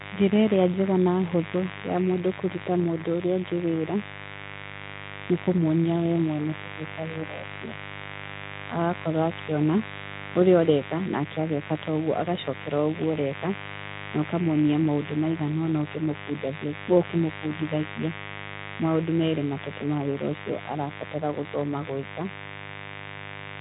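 A mains buzz sits under the speech from start to finish: 50 Hz switching spikes and their harmonics, roughly 10 dB below the talker, a steady rasp across a band that stops near 3.8 kHz.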